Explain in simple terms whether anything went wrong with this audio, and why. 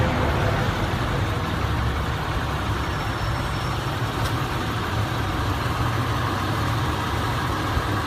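Overlap between stream segments at 6.86 s: two 2-second chunks claimed the same moment, so the player cut real sound, leaving a tiny skip.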